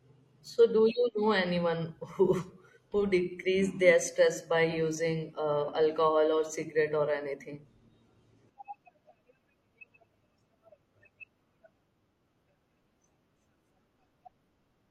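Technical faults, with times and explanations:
3.44–3.47 s, overlap between stream segments: overlapping segment timestamps, likely at a 2-second boundary, cut about 30 ms, so the waveform jumps before "their stress by".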